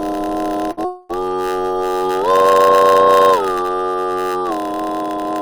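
A steady buzz at about 92 Hz runs through the whole music clip, which plays slightly slow at 0.919 times normal speed. This is a block size mismatch (padded): one stage writes shorter blocks than the next reads, and zeros fill each gap.

From 0.71 to 0.79 s a sound hangs on for about 58 ms before continuing with nothing lost. This is a short stall from a late packet: the jitter buffer ran dry and the last sound was stretched until the packet arrived.

From 0.85 to 1.11 s the sound turns into a fading buzz or hiss for about 242 ms, never reaching silence, then resumes where it left off. This call audio freeze likely comes from packets held up in transit, which emptied the jitter buffer.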